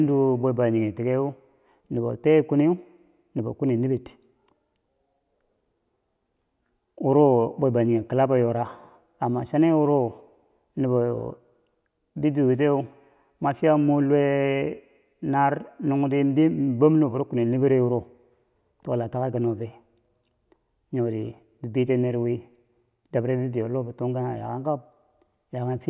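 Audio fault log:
Nothing to log here: I listened through this speech recording and didn't hear any technical fault worth a line.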